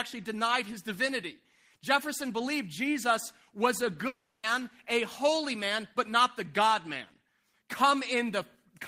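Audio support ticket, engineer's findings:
Long network dropout, 4.07 to 4.45 s, after "was a", before "a holy man but". Incoming audio stops. Last sound continues as a fading buzz or hiss for 0.36 s, then 50 ms of silence. Speech resumes with that stretch lost. Likely sustained packet loss on the network path.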